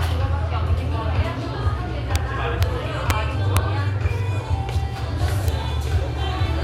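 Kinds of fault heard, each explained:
Integer overflow: violent cracks at 2.16, 2.63, 3.10, 3.57 and 5.48 s, where peaks passed the integer limit and wrapped to the opposite sign instead of limiting.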